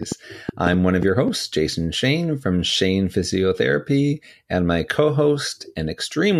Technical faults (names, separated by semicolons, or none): train of clicks